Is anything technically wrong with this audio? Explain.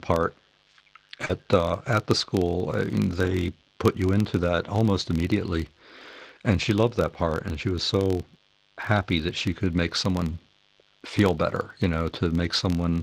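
Yes. Four faults can be heard in this speech.

Mains buzz runs through the whole clip. Switching spikes from a dimmer, rectifier or poorly shielded line enter the signal twice per 50 Hz cycle, so the interference is not a clean hum but a dense series of 50 Hz harmonics reaching well into the kilohertz range. It sits roughly 40 dB below the speech, which makes it a steady, raspy buzz.

A filter restarted on every block is also present for the full length. The filter discards its internal state at each block boundary and starts again from zero, so every block begins with a small transient. These repeat at 43.1 Hz, which fits a 1024-sample block at a 44.1 kHz rate. The result is a low buzz or ticking at that rate, louder when the speech is louder and fading in quieter passages.

Short concealed packet loss occurs from 1.25 to 1.31 s. About 40 ms of audio did not reach the decoder in time. 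The receiver covered the hole by extending the preceding sound, continuing its pitch if it was voiced or generating shaped noise if it was not, then crossfaded back into the real signal. It is heard as a brief smear or wobble, and a short consonant in that span may be lost.

Lost packets rebuilt from error correction appear at 1.29–1.35 s, overlapping the end of the concealed gap, and again at 7.29–7.35 s. Each event covers 40 ms, which points to two separate packets. The packet following each loss carried a low-bitrate Opus in-band copy, and the decoder played that copy, so there is no silence. Those frames sound rougher and noisier than the audio around them. The call itself went through Opus at 24 kbps with audio bandwidth ending around 12 kHz.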